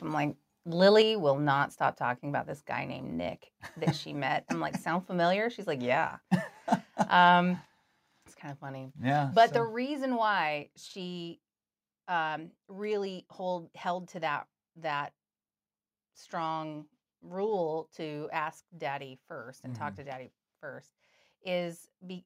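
Microphone volume stepped down at 1.02 s, 7.65 s and 9.57 s. Speech and background drop abruptly by about 4, 6 and 4 dB, likely from call software lowering input gain.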